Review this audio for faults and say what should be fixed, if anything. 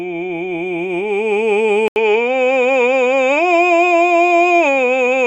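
At 1.88 s the music cuts out for 80 ms. From there to the end, nothing reaches above 7.6 kHz, so the top turns dull. A faint new noise floor appears, about 50 dB down. Level stays much the same. This is likely an input switched to a poorer device with a narrower band.

Lock the recording input so the system cannot change devices mid-take.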